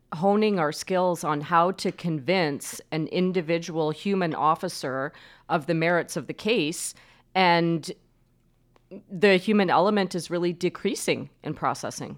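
No technical faults are audible.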